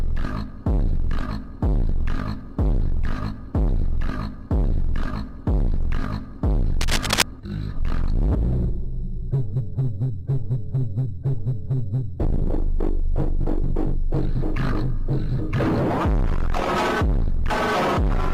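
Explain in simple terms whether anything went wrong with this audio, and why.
A burst of scratchy rustling, roughly as loud as the sound itself, runs from 6.81 to 7.22 s. This cable scratch noise is likely a worn cable or connector being moved.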